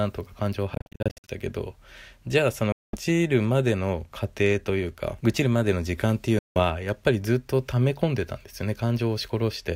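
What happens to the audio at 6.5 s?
At 6.5 s the speech cuts out completely from 6.39 to 6.60 s, a Bluetooth dropout where audio packets likely arrived too late at the headphones and were discarded. About 168 ms of sound is missing, and the speech resumes further along, as though it had kept playing through the gap. On a waveform this is a flat, empty stretch. A spectrogram shows a clean vertical band of silence across all frequencies.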